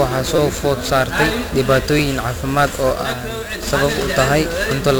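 Heavy 1-bit DFPWM compression runs through the whole speech clip. Each sample is a single bit nudging an adaptive level up or down. At 48 kbps this leaves dense broadband noise. Everything sounds fuzzy and crackly, and the treble sinks into hiss.

From 0.36 to 0.38 s there is a repeated buffer. A 5.8 ms slice, which fits a 256-sample buffer, plays four extra times with hard joins. Being so short, it comes across as a brief buzz. No audio appears to be lost.

From 3.03 to 3.62 s the level drops abruptly by about 6 dB, then returns. The likely cause is one stereo channel dropping out. Sound shared by both channels is halved in the mono sum, and anything only in the missing channel vanishes.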